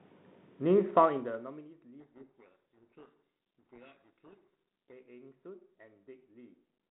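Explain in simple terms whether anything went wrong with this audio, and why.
Codec payload misread, from 2.00 to 4.92 s: the speech is buried under harsh, grinding distortion. The sending and receiving ends disagreed on the bit order inside each G.726 code word, so the decoder rebuilt the sound from scrambled numbers until both sides matched again.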